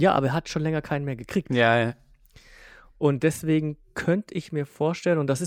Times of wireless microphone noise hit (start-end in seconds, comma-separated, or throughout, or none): none